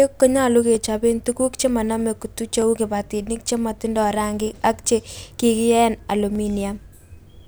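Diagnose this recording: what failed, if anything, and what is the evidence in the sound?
Clock drift buffer slips run from 0.75 s to 6.35 s: a click breaks the speech about every 1.87 s, roughly four times in all. The evenly spaced ticks point to the buffer stage. The likely cause is two devices on independent clocks, mismatched by around 200 ppm, so the buffer between them creeps until a block of about 15 samples is dropped or repeated, leaving a brief discontinuity each time.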